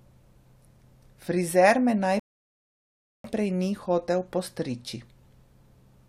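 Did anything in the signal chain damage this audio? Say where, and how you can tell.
Yes. At 2.20 s the speech drops to dead silence and holds there until 3.24 s, then picks up with "ni hotel postriči" exactly where it broke off, with nothing skipped or repeated. That is a rebuffering stall at the playback stage, fed by the network. The player's buffer of downloaded audio ran dry, so output halted until more data arrived. No audio was lost, but about 1.05 s of silence was inserted into the timeline.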